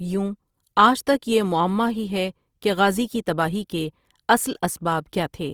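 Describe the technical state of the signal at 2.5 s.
At 2.5 s the speech carries plainly audible Opus compression, present through the whole clip: a grainy, rough texture where the encoder likely filled starved bands with folded or noise-like content, which fits a low music-mode rate near 24 kbps, with bandwidth still reaching about 20.3 kHz.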